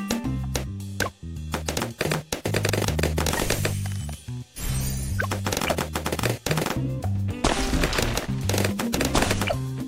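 Nothing stood out on listening to the audio.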